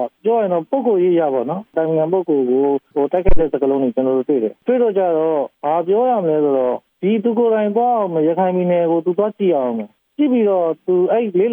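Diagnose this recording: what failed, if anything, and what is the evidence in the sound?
Analogue input stage: a phantom power thump at 3.29 to 3.4 s. A deep thud peaks near -3 dBFS, decaying within 26 ms, as a supply step crosses the coupling capacitors.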